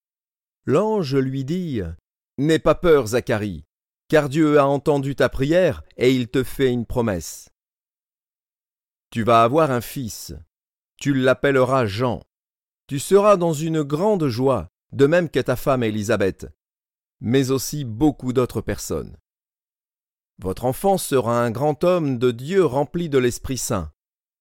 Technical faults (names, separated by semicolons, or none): none